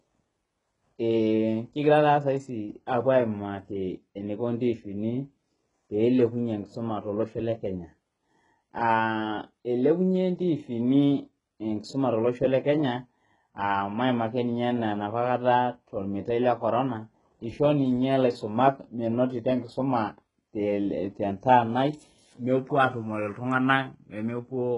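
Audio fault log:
Throughout: HE-AAC compression. The treble on this speech sounds present but synthetic, with s sounds coming out gritty and lispy and nothing at all above 11 kHz. It's likely HE-AAC at a very low rate, in the region of 12 kbps. Only the lower band is really coded, and the top is rebuilt by copying lower bands upward under a coarse envelope, so the harmonics don't line up across the join. The damage is heavy.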